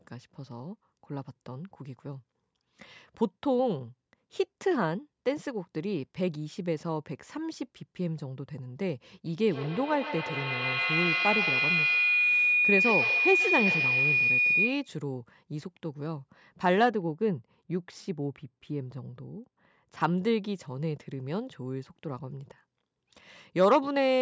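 From 9.26 s to 14.97 s a feedback howl builds. Two devices share the call in one room, and each pass from microphone to loudspeaker and back gains level, so the repeats grow instead of fading and narrow onto a single tone around 3 kHz. It pulses at roughly 150 ms, the loop's round trip, and peaks about 1 dB above the speech. On a spectrogram this is a bright horizontal line near 3 kHz, beaded at that repeat rate. The waveform's envelope swells steadily across the span.

From 16.90 s to 20.00 s de-emphasis was applied wrongly. A treble cut meant to undo pre-emphasis hit audio that never had it, or was applied a second time, so the response tilts smoothly downward with frequency, about 13 dB lower at 10 kHz than at 1 kHz. The speech turns dull and muffled. The spectrogram shows the upper region fading gradually toward the top rather than stopping at a hard edge. The call's microphone processing already leaves nothing above 8 kHz, so this shading sits below that ceiling.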